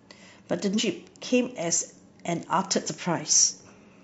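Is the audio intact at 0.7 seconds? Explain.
No. From 0.70 to 0.81 s the speech breaks into a short burst of garbled sound or a brief gap lasting about a tenth of a second. This is damaged data in a compressed stream: some bytes in that stretch of the file were lost, zeroed or overwritten. The decoder misreads or rejects those frames, loses its place, and hunts for the next valid frame header before clean speech resumes.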